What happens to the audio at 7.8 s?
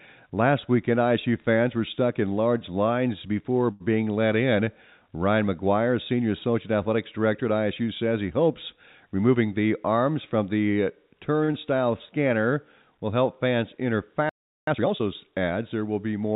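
At 7.8 s the speech passes through intact, with nothing dropped, clipped or glitched, only the narrow telephone-band sound of the call path, which carries nothing above 4 kHz.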